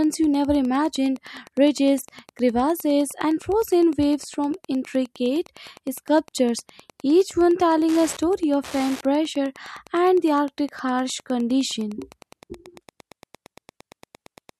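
From start to finish, a nearby Wi-Fi radio couples into the audio circuit, which rectifies its transmissions. This Wi-Fi interference shows up as a steady ticking under the speech, repeating every 102.4 ms, close to ten ticks a second. It sits roughly 25 dB below the speech.

At 12.41 s, right after "harsh condition", the remaining audio up to 14.59 s is played back at the wrong speed, likely because an editor or player conformed it to a mismatched clock. That section runs at 0.893 times its original speed, so the speech slows and drops by about two semitones, turning deeper and more drawn out from the moment the section begins.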